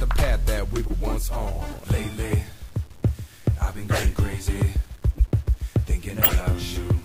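Throughout the clip a grainy, gritty distortion rides on the sound, coarsest in quiet passages and shifting with the signal, sitting very roughly 30 dB below it. The likely cause is low bit depth without dither, with rounding to about 7 bits.

Brief chirps and noise bursts cut in at 0.86 to 0.93 s, 2.26 to 2.33 s, 5.15 to 5.23 s and 6.23 to 6.33 s, the last by far the loudest. Each is a corrupt frame decoded: damaged compressed frames played anyway, spraying energy into wrong frequencies.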